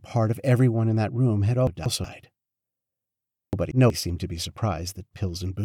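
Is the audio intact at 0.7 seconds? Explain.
Yes, the speech is intact at 0.7 seconds, with no audible fault at that point.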